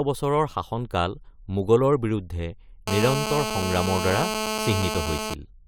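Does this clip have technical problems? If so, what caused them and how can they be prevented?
Yes. From 2.88 s to 5.34 s, just after "বছৰৰ শাসনকাল মোগলৰ বিৰুদ্ধে", a GSM phone buzz sits under the speech at about -4 dB relative to it: a hard, raspy tone at 217 Hz. A nearby 2G handset on a call pulses its transmitter 217 times per second, and the audio circuitry rectifies those bursts. On a spectrogram this appears as evenly spaced horizontal lines at 217 Hz and its multiples. The waveform shows a regular pulse train. Keeping mobile phones away from microphones, cables and interfaces prevents it.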